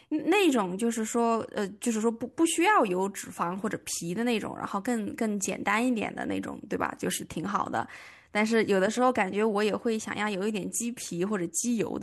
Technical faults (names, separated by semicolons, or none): crude rate conversion